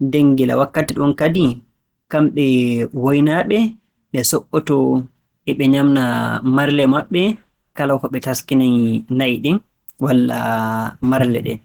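Throughout the speech, the sound is muffled and hoarse. The likely cause is Opus compression in its hybrid speech mode, consistent with roughly 16 kbps. Content still reaches 20.2 kHz, so the bandwidth is not narrowed.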